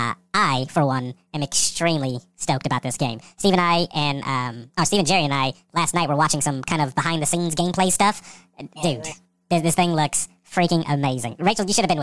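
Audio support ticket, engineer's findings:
Wrong sample rate, whole clip. Playback clock runs faster than capture rate, no resampling in the path. Ratio 1.5, consistent with 16 kHz material played at 24 kHz. Speech runs 1.5x fast, pitch raised about 7 semitones, voices high and hurried.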